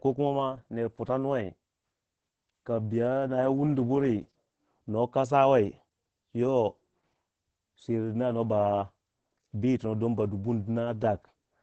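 From start to finish the speech carries Opus voice compression damage, and it is heavy. Nothing reaches above about 8.5 kHz, so the top octave is missing and the voice sounds muffled. The excitation is coded coarsely, which leaves a hoarse, slightly robotic texture. This behaviour points to SILK linear-prediction coding in wideband mode at a low bitrate in the region of 10 kbps, where detail is sacrificed to keep the stream small.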